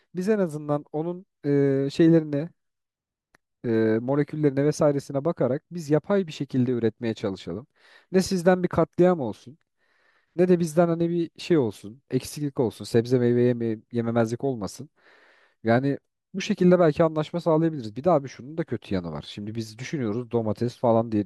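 Nothing stood out on listening to this recording of speech.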